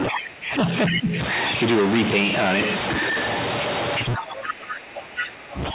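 Throughout the clip, distortion rides on the speech. The pauses are filled with noise. This fits a stuck bit, likely one data bit held at a fixed value. About half the samples are then off by that bit's weight.

From 0 to 0.52 s the talker's voice dips by about 20 dB, over roughly 0.4 s in total. This is speech suppressed in double talk. The echo canceller was likely unable to separate the talker from the loudspeaker echo, so it turned both down.

From 0.86 to 1.0 s a second voice breaks through, about 5 dB below the talker. This is the other side's voice leaking through. It was likely loudspeaker sound that the echo canceller failed to remove from the microphone.

From 0.89 to 1.16 s the talker dips again, by about 10 dB, over roughly 0.3 s. Around 4.14 to 4.24 s and 4.48 to 4.53 s, short scraps of the other voice leak in, about 10 dB down. From 4.18 s to the end the talker is pushed down by up to about 20 dB.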